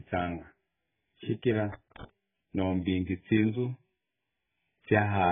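From start to finish, the speech is dull and smeared. Nothing reaches above about 3.6 kHz, so the top of the spectrum is gone. Sibilants turn fizzy, and sustained sounds warble. The damage is heavy. The likely cause is AAC compression, with AAC-LC starved of bits. It has lowered its cut-off. That pattern fits a very low bitrate, around 8 kbps.

From 1.72 to 2.04 s, a loose connector crackle breaks through. It is an irregular burst of scratching. A worn or dirty contact is making and breaking as it shifts. Each break chops the signal, and any DC on the line adds pops. The burst lasts about a third of a second and then stops.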